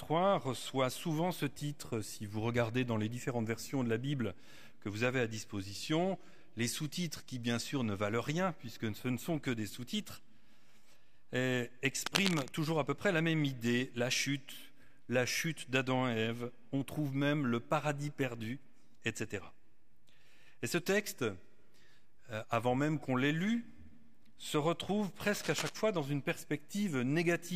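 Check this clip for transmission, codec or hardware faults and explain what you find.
Cable scratch noise appears twice, from 12.06 to 12.49 s and from 25.20 to 25.74 s. The likely cause is a worn cable, connector or control being moved, so contact resistance fluctuates rapidly. Each burst is a dense, uneven scratching rustle, the first about as loud as the sound, the second somewhat quieter.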